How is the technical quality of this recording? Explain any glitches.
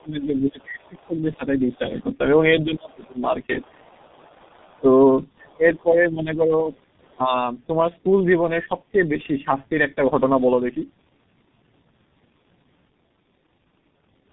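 The recording is degraded throughout by repeated speech coding, and the first seven seconds also have level drops and a faint second voice, most likely from a struggling echo canceller.

Tandem speech coding runs through the whole clip. The speech sounds rough, muffled and warbly, with nothing above 3.8 kHz. That pattern fits a call that passed through several codecs in sequence, starting and ending with a low-rate coder such as G.723.1 at 6.3 kbit/s. Each coder re-encoded the damage left by the one before, so the artefacts compound. A single low-bitrate codec would sound band-limited but cleaner. Here the grain and wobble are layered. The bass is trimmed in the usual way by the call's microphone high-pass filter.

Speech suppressed in double talk occurs from 0.0 to 3.83 s and again from 4.8 to 7.32 s. The talker's level dips in patches, by about 20 dB at worst in the first stretch and about 15 dB in the second. 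The dips total roughly two seconds and one second respectively. This is likely an echo canceller that mistook the talker for loudspeaker echo while both sides spoke at once.

The other side's voice leaks through from 3.04 to 5.82 s. A faint second voice sits about 30 dB below the talker. It is likely loudspeaker sound that the echo canceller failed to remove fully from the microphone. It overlaps the suppression stretches, as expected when both sides talk at once.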